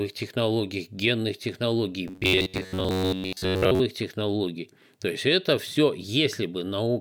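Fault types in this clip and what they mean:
Robotic sound from repeated short buffers: After "технологий генных технологий", from 2.08 to 3.81 s, the speech becomes a rigid, metallic buzz near 94 Hz. Likely cause: a chunk of about 11 ms replayed for most of that stretch, skipping the real audio.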